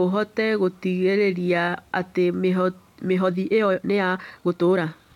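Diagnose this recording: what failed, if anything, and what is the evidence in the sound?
From 3.16 s to the end, speech runs 1.5 times faster at unchanged pitch, rushed: a time-stretched section, likely from processing that dropped short pieces.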